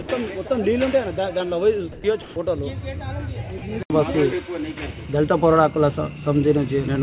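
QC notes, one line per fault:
0.02–0.08 s, 0.48–0.50 s, 2.22–2.36 s, 3.58–3.62 s: sound dropped by the voice detector. Brief stretches of sound give way to steady noise. The detector likely mistook them for background and stopped sending.
1.92–2.04 s: comfort noise in place of the background. The real background, about 24 dB below the loud parts, becomes featureless steady hiss, about 1 dB different in level. The likely cause is that the sender paused transmission.
2.02 s: onset clipped by the voice detector. The returning sound starts abruptly, missing about 20 ms of its soft beginning, likely because the detector reacted late.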